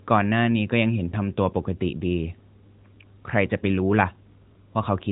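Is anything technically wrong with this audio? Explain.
Yes. Between 1.10 and 1.17 s there is a lost AMR speech frame: a single 20 ms frame failed its checksum, so the decoder filled the gap by repeating the last good pitch and vocal-tract settings at reduced gain. This produces a brief dip or warble in the speech before normal decoding resumes. The surrounding audio carries the narrowband AMR codec's 4 kHz ceiling and light coding texture, consistent with the 12.2 kbps mode.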